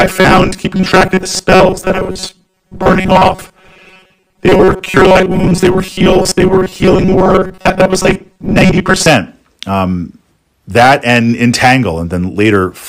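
From 0.01 to 9.08 s, audio likely arrived too seldom, so short snippets were looped: robotic sound from repeated short buffers, a rigid 188 Hz buzz.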